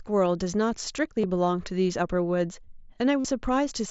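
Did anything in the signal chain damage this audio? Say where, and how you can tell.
Yes. A brief buzzy, held tone replaces the sound at 1.21 s for about 23 ms, and again at 3.21 s for about 45 ms, ending in a slight warble. This is concealed Bluetooth headset packet loss on the wireless link: lost packets were filled by repeating recent waveform.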